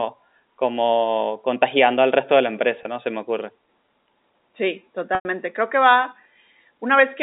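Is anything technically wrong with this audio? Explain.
Yes. Packet loss with pitch repetition occurs twice in this speech, from 2.83 to 2.85 s and from 5.15 to 5.25 s. Audio packets failed to arrive, and the receiver filled each hole by looping the most recent pitch cycle while fading it down. The first gap, about 20 ms, sounds like a brief buzzy hold on the voice. The second, about 100 ms, fits ten 10 ms packets; the repeated cycle dies away into silence before the speech cross-fades back in, all within the narrow G.711 telephone band of roughly 250 Hz to 3.7 kHz.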